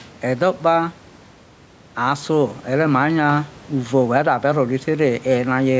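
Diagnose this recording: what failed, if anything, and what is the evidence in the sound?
Gain pumping runs through the whole recording. The gain swings by roughly 5 dB, so loud and quiet passages sit unnaturally close in level and the speech sounds squashed. The likely cause is input gain set far too high at the microphone or analogue stage, with a fast limiter or compressor in the call processing clamping down on every loud syllable. The room noise underneath stays well below the speech.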